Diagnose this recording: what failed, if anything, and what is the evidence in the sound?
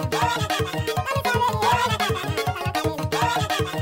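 The failure is in sample-format conversion: the audio is read two samples at a time (double speed). Throughout, everything plays at twice the rate and a full 12 semitones higher. The reader treats each sample pair as one frame, as if expecting two channels or wider samples.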